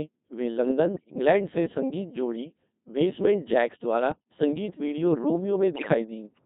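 From start to finish the speech passes through the Codec 2 vocoder, at a rate that points to its 2.4 kbit/s mode. Only pitch, voicing, energy and a coarse envelope survive, rebuilt from sine waves, so it sounds heavily robotic and buzzy. A spectrogram shows rigid harmonic combs with smeared formants and no natural noise detail.

Bit errors on digital voice radio break in at 0.94 to 1.16 s, 4.12 to 4.20 s and 5.76 to 5.94 s. With roughly a tenth of the bits flipped in the first two bursts, and somewhat more in the last, whole frames decode with the wrong pitch, level or spectrum. The result is bleeps and warbling gibberish, seen as sudden harmonic jumps and blocky level steps in the waveform.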